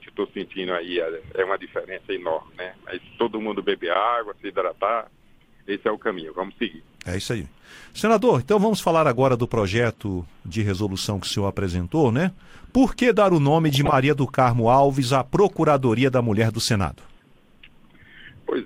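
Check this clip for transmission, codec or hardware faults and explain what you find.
One transmission fault is audible, a short burst of DAB burbling.

From 13.69 s to 13.93 s the programme is overlaid with burbling noise. Weak reception let bit errors, at a rate that sounds like a fraction of a percent, slip past the error correction into the MP2 data. Corrupted samples put short blips of noise in single sub-bands, and corrupted scale factors make sub-bands jump in level for up to a frame. The quarter-second span fits a run of 14 corrupted frames.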